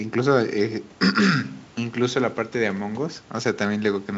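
No technical faults can be heard in this speech.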